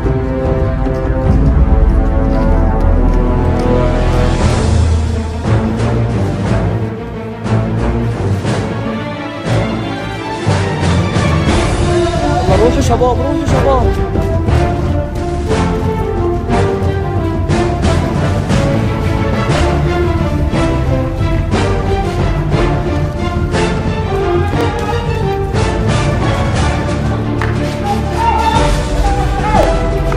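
Overlapping chunks cause a brief stutter at 4.51–4.53, 9.53–9.56, 14.56–14.58, 19.58–19.61, 24.61–24.63 and 29.63–29.66 s. Each new 5 s chunk starts 25 ms early, so that sliver plays twice. Unlike a dropout, nothing goes missing; the strict 5 s spacing gives it away.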